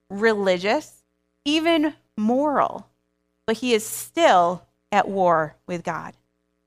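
No technical faults are audible.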